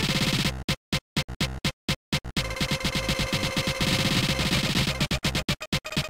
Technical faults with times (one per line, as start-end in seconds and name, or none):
2.70-5.42 doubled audio track